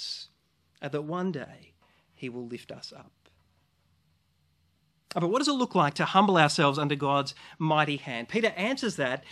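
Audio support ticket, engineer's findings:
No faults found in recording.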